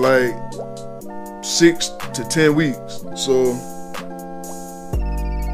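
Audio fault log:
3.10 s, compressed frames skipped: the decoder fails to play what sounds like a single whole frame of the compressed stream, either because it is missing from the file or because it was refused as damaged, so the audio jumps forward by roughly 30 ms, which fits a frame length of about 26.1 ms.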